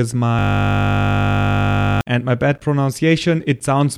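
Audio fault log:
0.39–2.01 s, system hang loop: the speech gives way to a steady buzz at 50 Hz that holds for about 1.6 s before speech resumes on "and my bad". The computer or audio driver stalled while the sound hardware kept replaying the same ring buffer, so one 20 ms slice of audio repeated roughly 80 times back to back. A loop that short is heard as a tone at its repeat rate rather than as a stutter.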